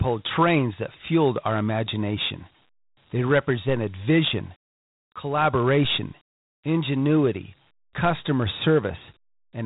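Speech, carried throughout by Dialogic VOX ADPCM, the 4-bit adaptive coding used for phone menus and voicemail. Nothing reaches above about 3.8 kHz, which fits an 8,000-sample-per-second VOX file at 32 kbps. The coding damage is plainly audible as a gritty hiss that rides on the speech and rises and falls with it. A plain telephone-band filter would give the same dull top but no grain. G.711 μ-law at the same band gives a finer roughness than this gritty hiss. At 5.85 s there is a DC step, a sudden jump in the waveform's zero line like a converter recalibrating or an offset input being switched in. It is heard as a single low thump or click while the speech carries on unchanged. The offset then drains away within a fraction of a second, as a high-pass at about 2 Hz would pull it back. That recovery marks it as a baseline shift, not a dropout.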